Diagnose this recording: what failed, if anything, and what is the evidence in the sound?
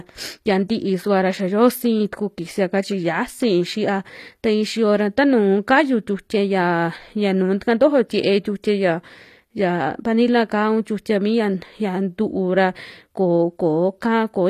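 The codec stage failed. Throughout the speech, s sounds turn gritty and lispy, and the upper treble sounds synthetic. Nothing reaches above 15 kHz. This points to HE-AAC compression, likely at about 24 kbps, rebuilding treble from copied lower bands.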